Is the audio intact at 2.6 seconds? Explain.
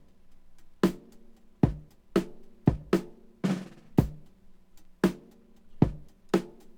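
No. At 2.6 seconds, as throughout the clip, there is a block size mismatch (truncated). One stage writes longer blocks than the next reads, so each block's tail is dropped. This gives a buzz at 43.1 Hz, which fits 1024-sample blocks. Speed and pitch stay normal.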